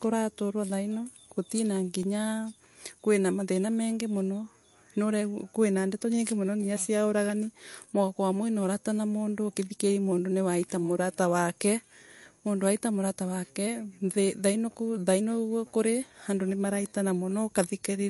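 Throughout the speech, the damage points to likely MP3 compression at a low bitrate, consistent with roughly 48 kbps. With so few bits, the encoder cuts the treble, and nothing is heard above 11.3 kHz. It also drops weaker frequency lines that then flicker in and out from frame to frame. The result is plainly audible: a watery, swirling texture, metallic chirps on s sounds, and softened consonant attacks.

At 2.03 s, new audio failed to arrive in time, so the device played its last buffer once more. The repeated piece is only about 1.5 ms long, which fits a 64-sample buffer, so the double play is too short to register as a stutter. Instead the hard joins either side of it produce a click or brief buzz, and roughly a millisecond and a half of the real audio is lost there.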